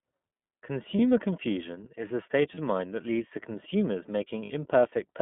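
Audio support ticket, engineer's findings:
iLBC codec, whole clip: band-limited, slightly rough, synthetic-sounding speech, with plainly audible coding damage. The spectrogram shows energy confined to about 150 Hz to 3.5 kHz, with a hard empty band above. The mechanism is narrowband frame-independent excitation coding, consistent with iLBC's 13.33 kbps, 30 ms mode. Probable component: the VoIP leg negotiating iLBC.

Lost iLBC frames, three events: brief held, buzzy vowel-like fills where packets dropped.
0.96–0.99 s, just before "confusion is a state": 30 ms, fits one lost frame.
2.55–2.59 s, between "confusion is a state" and "mind that leads to": 30 ms, one frame.
4.43–4.51 s, after "that leads to consumers": 60 ms, likely two consecutive frames.
On the waveform, each gap is a repeated pitch cycle with added noise. On the spectrogram, each shows as flat, stretched harmonics. The speech recovers immediately after each one. 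Probable cause is network packet loss concealed by the iLBC decoder.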